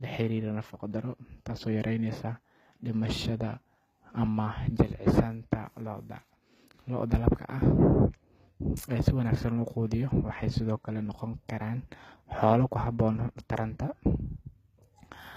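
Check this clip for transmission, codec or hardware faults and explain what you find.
One codec fault runs through the clip. HE-AAC compression, likely, from start to end: the treble is rebuilt by copying lower bands upward rather than coded, so sibilants sound gritty and metallic, nothing reaches above 14.9 kHz, and the plainly audible damage fits a low bitrate around 20 kbps.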